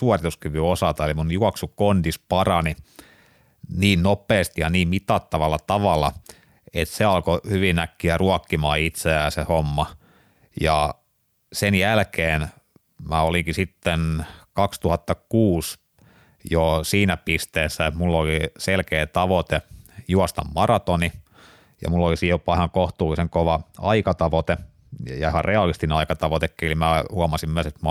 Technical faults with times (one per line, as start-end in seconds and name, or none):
21.89-25.94 de-emphasis applied wrongly